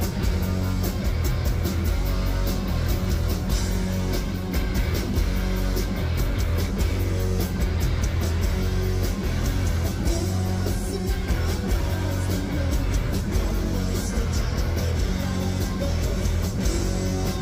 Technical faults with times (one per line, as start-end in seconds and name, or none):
none